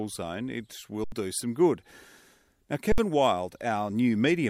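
A speech clip with two underruns with held sample: at 1.04 s, after "zone it", and at 2.92 s, the output buffer emptied and the converter held its last value for 80 ms and 60 ms. The waveform shows flat plateaus, the spectrogram blank columns, each where roughly 70 ms of audio was lost.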